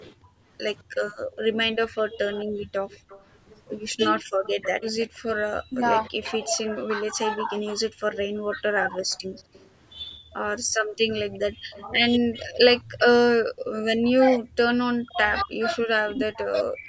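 A speech recording from a call, with three faults. When both ends talked at once, the echo canceller likely could not tell the local talker from loudspeaker echo and turned everything down, so from 0.23 s to the end at 16.9 s the speech dips by as much as around 40 dB, adding up to roughly seven seconds of suppressed or broken-up speech. Separately, the echo canceller gated the microphone while the loudspeaker played, pulling the background down by about 35 dB from 0.82 to 0.96 s before the room sound returned. The far side's echo canceller also likely let part of its loudspeaker pickup through: an echo leak from 1.32 to 13.01 s carries a copy of the speech delayed by 218 ms, sitting around 20 dB below it. The call's microphone processing limits the audio to nothing above 8 kHz.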